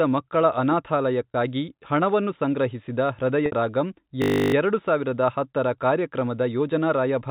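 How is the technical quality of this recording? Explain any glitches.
The speech carries three audible glitches, of two kinds, heard over a telephone-band sound that fits G.711 mu-law coding, with nothing above 4 kHz.

Packet loss with pitch repetition occurs at 1.32–1.34 s, just before "ಹಣವನ್ನು ಸಂಗ್ರಹಿಸಿದ", and at 3.46–3.52 s, just after that phrase. The receiver filled each gap by repeating the last pitch period. The 20 ms gap, consistent with one lost packet, sounds like a briefly held buzzy tone. The 60 ms gap, pointing to three packets, fades toward silence before the speech cross-fades back.

A system hang loop runs from 4.22 to 4.54 s. The driver stalled while the hardware kept replaying one 20 ms buffer 16 times, producing a steady 50 Hz buzz. Unlike the concealment, it repeats exactly and never fades. Little or no speech is lost.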